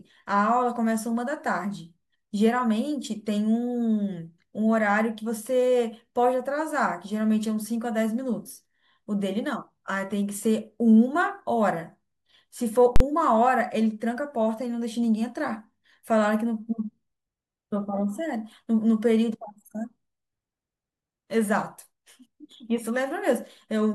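At 12.96 s the speech gets hit with a very loud bang lasting to about 13.00 s. That's the invalid-numbers-at-full-scale fault: a calculation returned infinite or invalid values, and they were clamped to the largest positive or negative sample value for one whole processing block. The 43 ms span fits a 2048-sample block. Pinned flat at one extreme value, far beyond the speech peaks, for that short a stretch, the onset and release click merge into a single harsh bang.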